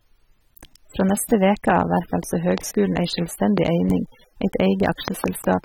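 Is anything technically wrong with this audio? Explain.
Yes. The speech has a dull, smeared quality throughout, with a warbling, fizzy texture on sustained sounds and sibilants. Content is present up to about 19.3 kHz, so the damage comes not from a low cut-off but from coarse quantisation inside the band. This is likely AAC compression: AAC-LC splits each frame into frequency lines and discards detail the hearing model deems masked. The plainly audible damage fits a low bitrate of around 27.5 kbps.

Four loud pops jump out at about 15 dB above the speech, which carries on beneath them: single sharp pops at 2.58 s and 3.58 s, then a pair in quick succession from 5.08 to 5.26 s. Each is a sudden voltage step or pulse added to the signal, likely from a plug, switch, static discharge or driver glitch, shaped by the circuitry that followed into a brief, hard transient.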